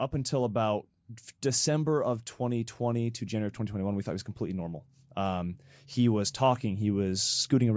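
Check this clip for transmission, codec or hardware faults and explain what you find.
One fault stands out, an automatic gain rising. From 2.50 to 4.35 s the speech and the background noise behind it swell together, growing by about 3 dB over nearly two seconds rather than jumping. Because the room noise rises in step with the talker, the change comes from the signal chain, not the speaker getting louder. The automatic gain control judged the input too quiet and raised its gain gradually. The call microphone processing can be heard in the missing lowest bass and the absence of content above 8 kHz.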